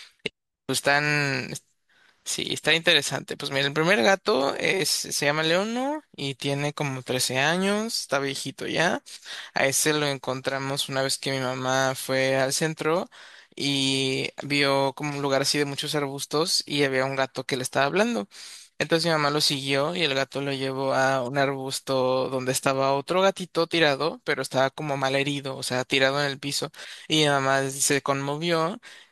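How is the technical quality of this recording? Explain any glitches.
No glitches or technical faults turn up anywhere in this recording, so there is nothing to explain.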